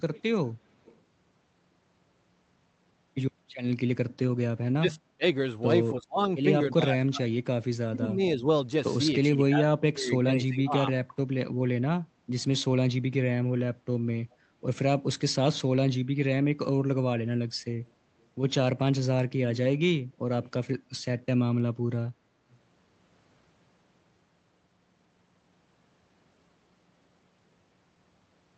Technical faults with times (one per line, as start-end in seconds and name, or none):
0.00-1.01 echo leak
4.78-10.75 speech suppressed in double talk